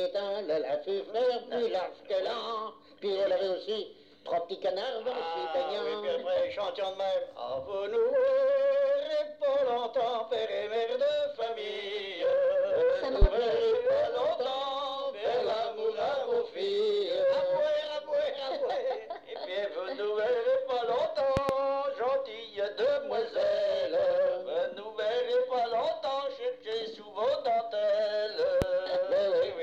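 At 13.22 to 13.26 s a single loud pop cuts in, peaking roughly 20 dB above the surrounding sound, which continues underneath. From 21.37 to 21.53 s two pops follow in quick succession, and a third single pop lands at 28.62 to 28.66 s. Each is a sharp, brief thump. The likely cause is a sudden voltage step or pulse, such as a plug, switch contact or static discharge, added to the signal and shaped by the circuitry downstream.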